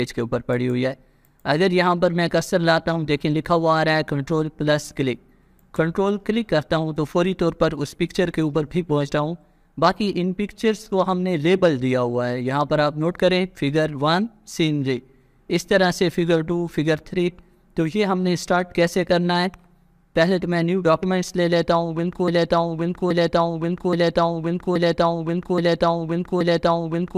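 From 22.28 s to the end the audio falls into a broken-record loop, one 0.83 s fragment repeating exactly, six times, unlike decaying echo, likely from a stalled player or stream.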